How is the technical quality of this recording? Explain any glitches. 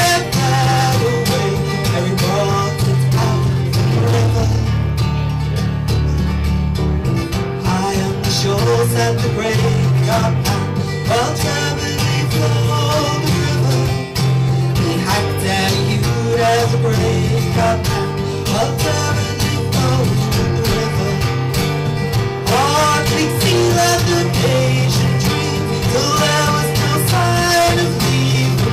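No audible glitches or faults.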